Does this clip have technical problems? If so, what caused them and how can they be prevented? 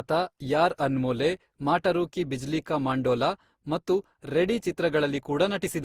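Yes. Generation loss runs throughout the speech, which sounds swirly, smeared and hollow, with blurred attacks. The likely cause is about ten rounds of lossy re-encoding, pointing to Opus near 64 kbit/s. Each pass re-quantised on a shifted frame grid, stacking noise. Keep a lossless master and encode only once.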